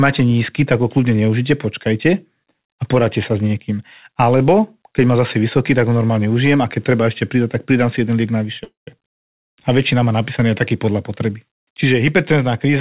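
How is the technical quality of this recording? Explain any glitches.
The recording is narrowband call audio with nothing above 4 kHz, which points to a G.711-style codec, and it has two glitches near the end.

The call audio freeze runs from 8.64 to 9.00 s, just after "pridám si jeden liek". Delayed packets likely let the jitter buffer run dry. The last sound is stretched into a fading buzz, then about 140 ms of silence. Speech resumes where it stopped, roughly 228 ms late, with nothing lost.

The jitter buffer speed-up runs from 12.65 s to the end of the clip. The buffer held excess audio, so the receiver trimmed short pitch-period chunks, about 50 ms in total. The final syllables play at about 127% speed with unchanged pitch and sound briefly hurried.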